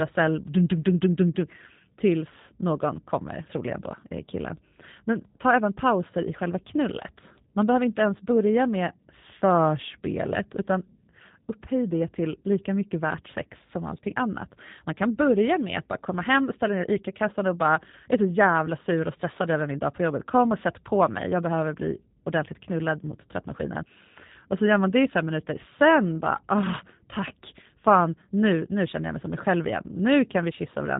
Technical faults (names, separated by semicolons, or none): G.729 codec